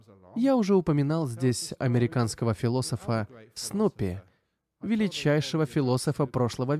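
Nothing in the speech stood out as a technical fault on listening.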